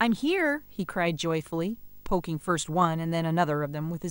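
Throughout the speech, video or display buzz: a 50 Hz field-rate buzz with hash and a faint 15.6 kHz line tone, which plain mains hum lacks, sitting well below the voice.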